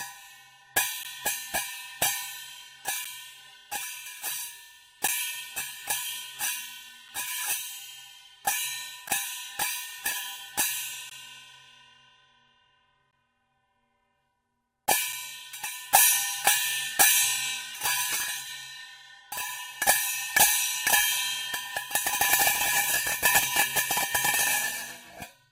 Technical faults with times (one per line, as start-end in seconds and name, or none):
1.03 gap between stream segments
3.04 gap between stream segments
5.07 gap between stream segments
9.08 gap between stream segments
11.09 gap between stream segments
13.11 gap between stream segments
15.13 gap between stream segments